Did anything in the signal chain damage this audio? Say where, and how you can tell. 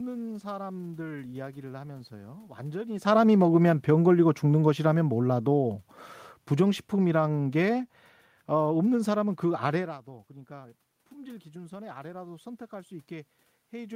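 Yes. The automatic gain control in the call-processing stage reshapes the level from 10.05 s to the end of the clip. Around 10 s the talker moves away, and the input falls by about 16 dB. The gain control reads this as a quiet input and slowly raises its gain to compensate. You can tell it is processing, not the talker, because the room noise swells along with the voice over more than a second.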